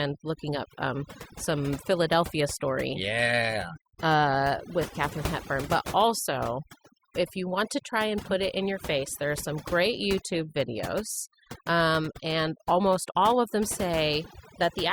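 Throughout the clip, overdone noise removal leaves the background lowered, speckled with twinkling specks. Unlike a noise gate, which mutes whole stretches between phrases, this suppression works band by band, eating quieter parts of the voice too.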